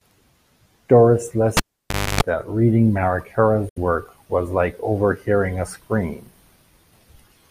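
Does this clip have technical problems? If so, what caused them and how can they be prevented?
Yes. From 1.57 to 2.21 s, before "that reading", a pop gives way to about 0.59 s of near silence, including 0.28 s of 50 Hz buzz, then another pop. This is a cable pulled and plugged in while live. Secure connectors, or mute the channel before re-patching.

From 3.69 to 3.78 s, just before "work was like overhearing", the speech cuts to silence for about 70 ms and resumes further along. This is likely a Bluetooth dropout, where late packets were discarded. Keep the headphones close to the source with a clear path, or use a wired connection.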